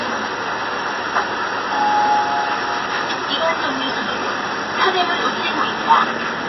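Throughout, the sound is dull and watery, with nothing above 5.8 kHz and swirling artefacts, likely from MP3 compression at a low bitrate around 24 kbps.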